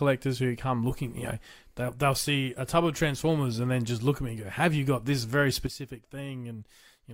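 At 5.67 s, right after "you got this very", the level falls by about 11 dB in a single step and stays there until the clip ends at 7.14 s. This is a sudden gain jump, likely from a digital gain setting applied instantly with no ramp. The speech and the background noise drop together, which separates it from a fade, which would slope, and from compressor gain reduction, which would recover rather than hold.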